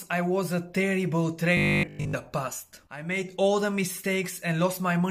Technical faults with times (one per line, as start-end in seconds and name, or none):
1.57-2.15 robotic sound from repeated short buffers